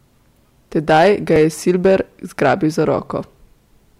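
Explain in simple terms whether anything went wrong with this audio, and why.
Between 0.89 and 2.00 seconds, and again from 2.42 to 2.80 seconds, the louder parts of the speech turn rough and buzzy, with a crackly edge on the strongest sounds. This is hard clipping. The recording was pushed louder than the equipment could handle, so the tops of the sound wave were sliced off flat. Those flattened peaks create harsh extra tones that weren't in the original voice, which gives it that gritty, overloaded quality.

At 1.36 seconds, in the middle of the first rough stretch, the sound jumps very slightly forward. The likely cause is a dropped buffer (overrun): the computer didn't collect a small batch of incoming audio in time, so that batch was overwritten and lost. Only a tiny fraction of a second went missing, and the two sides of the gap were joined directly. That abrupt join is what you hear as the jump.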